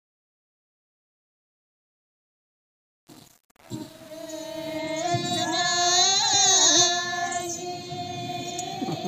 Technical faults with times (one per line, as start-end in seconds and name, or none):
0.00-4.78 truncation distortion on a fade